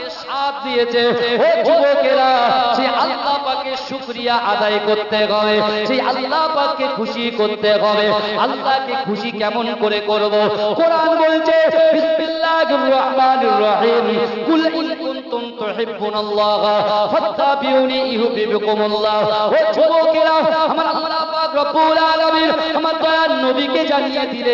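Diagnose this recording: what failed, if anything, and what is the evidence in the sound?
Aliasing, and it's in the sample-rate conversion stage. Right through the clip the top end sounds gritty and metallic, with odd tones that don't track anything else in the sound, and the spectrum runs hard up to a wall at 6 kHz. That fold point fits a drop from 44.1 kHz to 12 kHz with no low-pass first, so everything above 6 kHz mirrored back down as unrelated pitches, sitting somewhere around 25 dB under the wanted sound.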